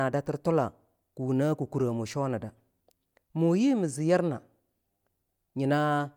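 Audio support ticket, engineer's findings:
No faults found on listening; no action required.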